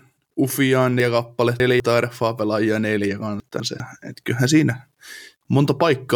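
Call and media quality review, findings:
Chunks out of order at 1.0–1.8 s: jumbled speech. One 200 ms chunk plays three chunks late, so three hard joins. Jitter buffer or writer reordering. Waveform shows abrupt steps at joins; spectrogram shows broken formant tracks and vertical lines at the joins.

Chunks out of order at 3.4–3.8 s: a briefer garble, one 200 ms chunk swapped with its neighbour. Same mechanism and same visual signature.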